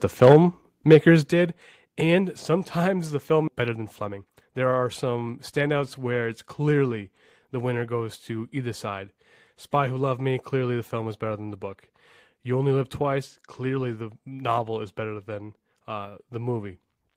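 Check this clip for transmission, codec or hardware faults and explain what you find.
Four faults are audible: clipping at the start, two sudden level drops, a jump forward in the speech, and a short hurried stretch after it.

Microphone overload, 0.22 to 0.36 s. The likely cause is an input gain set too high, so the loudest peaks drive the converter about 4 dB past its ceiling and their tops are flattened. Around one sample in twenty is clipped across that span. The syllables there take on a harsh, crackling edge instead of a clean rounded peak.

Microphone volume stepped down, at 0.32 s and again at 1.32 s. These drops are likely the call software reacting to that overload by cutting the microphone's input gain in single steps, about 3 dB and then about 7 dB. Because the change happens at the device, voice and background fall together. The first step lands right in the clipped burst, and the second is a plain, abrupt drop in loudness a second later.

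Skip ahead, 3.47 to 3.49 s, right after "and sometimes the". About a second of audio never reached playback, either lost in transit or discarded by an overflowing jitter buffer while later audio was already queued. Nothing fills the hole. The speech on either side is butted almost directly together, so the sentence lurches forward with a chunk missing.

Jitter buffer speed-up, 3.61 to 5.05 s. Just after the jump, the receiver was still holding more audio than its target. It trimmed the excess by repeatedly cutting out pitch-period-sized slivers, roughly 150 ms in all. Playback runs at about 109% speed with the pitch unchanged, so this stretch sounds hurried.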